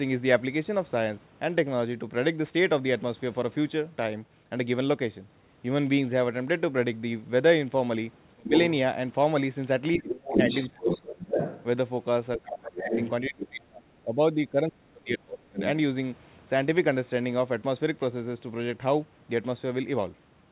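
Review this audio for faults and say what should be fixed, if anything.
Speech suppressed in double talk at 8.35–8.51, 9.97–11.03 and 12.37–15.59 s: the speech dips by about 25–30 dB, likely because the echo canceller muted both overlapping talkers. A double-talk detector tuned to hold near-end speech during overlap would prevent this.

Other side's voice leaking through at 8.53–8.59, 10.06–11.64, 12.52–13.89 and 15.36–15.69 s: a second voice sits roughly level with the talker or up to about 5 dB below, likely loudspeaker echo left in by the canceller. On this narrowband path there is nothing above 4 kHz. A headset, or a longer echo-canceller filter with faster adaptation, would prevent this.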